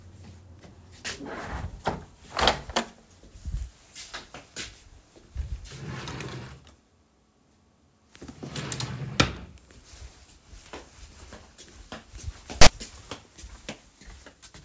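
At 12.62 s a hard-edged burst of static cuts in and stops at 12.67 s, about 50 ms later. This is file tags played as audio: a block of text metadata was read as if it were sample data. Character codes cluster in a narrow range of byte values, so the resulting waveform sits off centre, giving a loud, lopsided rasp rather than even hiss, with abrupt starts and stops where the tag block begins and ends.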